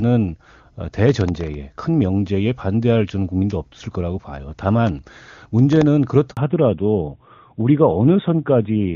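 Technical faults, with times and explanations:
1.09–1.54 s and 4.87–5.82 s: processor overload crackle. A gritty, tearing crackle rides on the speech in two bursts, the second a little over twice as long. Tiny buffers, under a millisecond each, miss their deadlines in a row and old audio is replayed with hard edges. Unlike a network dropout, the sound never falls silent.
6.31–6.37 s: handover gap. The speech dies away and stays silent for 60 ms while the call switches networks and no frames arrive; whatever was said in that span is lost. It is a single clean hole rather than crackle, and it marks the point where the sound character changes.
6.37–8.96 s: fallback to narrowband. From the handover onward nothing above 4 kHz remains, so the voice turns duller and rougher than the clear HD Voice before it. The call has dropped from AMR-WB at 23.85 kbit/s to AMR-NB at 12.2 kbit/s, a lasting change of bandwidth rather than a momentary glitch.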